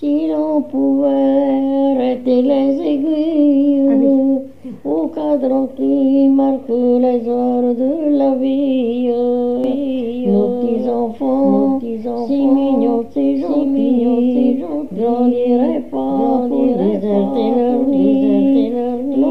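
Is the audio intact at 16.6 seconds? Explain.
No. At 16.6 seconds the sound is carrying a doubled audio track. From 9.64 s to the end of the clip, a second full-band copy of the same audio runs about a second behind the original, roughly 5 dB quieter. It has no reverberant tail or room colouring and it switches in abruptly. This is likely caused by the signal being captured twice, with one copy arriving through a slower path, so every event is heard again as a dry, delayed echo.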